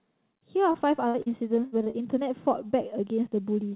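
A short stretch of speech over a call line, band-limited with nothing above 4 kHz, which fits narrowband G.711. It has two kinds of packet-loss damage. There's short concealed packet loss at 0.72 to 0.76, 1.22 to 1.28, 1.84 to 1.88 and 1.90 to 1.96 s, gaps of about 20 to 40 ms where the receiver papered over the hole by extending the last bit of sound, so you hear quick smears or wobbles. Then there are two bursts of packet loss, at 1.08 to 1.16 and 1.66 to 1.74 s, each about 60 ms lost in a row. Concealment stretches and fades the previous sound into a held buzz or dying hiss before the audio picks up again further on, with the middle gone.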